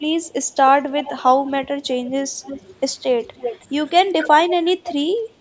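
Echo leak, about 35 to 10 dB below the speech, appears at 0.22–0.29, 0.9–1.21, 1.46–1.51, 1.82–2.1, 2.42–2.6 and 3.37–3.65 s. A delayed copy of the speech trails by about 310 ms. The far end's canceller likely left it unremoved. Then, at 4.09–4.33 s, speech is suppressed in double talk. The voice dips by up to about 15 dB, likely ducked by a canceller confused by overlapping talk. Echo leak returns at 4.83–4.93 s.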